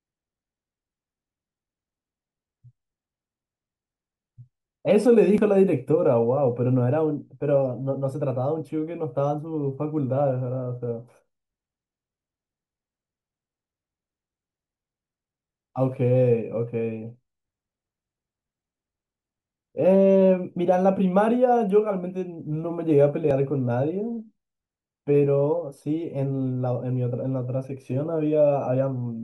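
The speech has two brief skips, at 5.38 s and 23.31 s. Each drops about 30 ms of sound, and the material on either side is butted together with no gap. This is likely audio missing between chunks: the recording path processes sound in 6.0-second blocks and loses a sliver at each block boundary. The two skips sit three block lengths apart, which is consistent with that regular chunk spacing.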